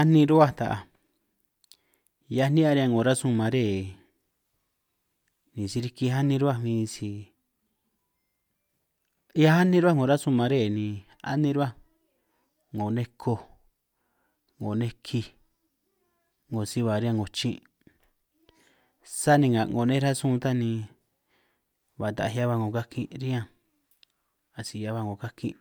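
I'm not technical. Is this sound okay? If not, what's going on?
Yes, nothing stood out as a problem when listening to this recording.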